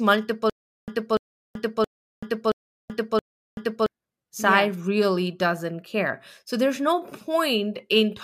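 From 0.50 to 3.86 s the speech falls into a stutter with silent gaps. The same 0.29 s fragment plays five times, each followed by about 0.38 s of dead digital silence, so the burst returns every 0.67 s at an even pace. The likely cause is a stalled player or stream replaying its last buffered fragment on each retry before running empty. Unlike plain dropouts, the sound before each gap repeats instead of moving on, and what should have filled those seconds never arrives.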